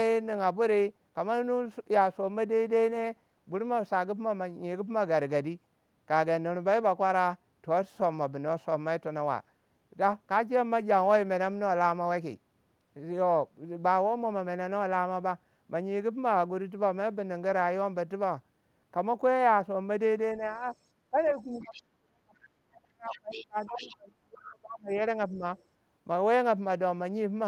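The speech dips at 21.1 to 21.17 s, again through a long stretch from 21.42 to 24.99 s where it falls by roughly 30 dB at its deepest, and briefly at 25.3 to 25.43 s. This is speech suppressed in double talk, likely an echo canceller ducking the talker while the far side was also speaking. Faint scraps of a second voice come through at 21.52 to 21.82, 23.1 to 23.47, 23.67 to 23.95 and 25.57 to 25.63 s, well below the main speech and loudest around 23.7 s. This is the other side's voice leaking through, likely loudspeaker echo the canceller failed to remove.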